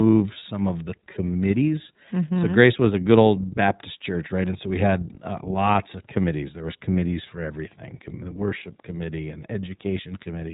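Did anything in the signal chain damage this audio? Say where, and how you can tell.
Yes, at the codec stage: the iLBC codec shapes this speech throughout, with nothing above 3.8 kHz and a plainly rough, synthetic edge. A plain low-pass filter would sound dull but smooth. This graininess comes from coding each frame's excitation separately, consistent with 30 ms frames at about 13.3 kbps.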